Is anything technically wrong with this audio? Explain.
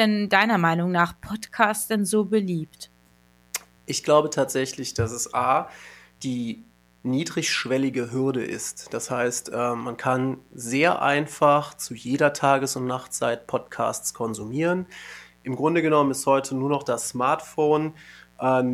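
Yes. A mains buzz runs under the speech for the whole clip, sitting well below it. Switching spikes from a dimmer, rectifier or unshielded cable strike twice per 60 Hz cycle, spraying harmonics into the kilohertz range. That makes a raspy, edged buzz rather than a smooth low hum.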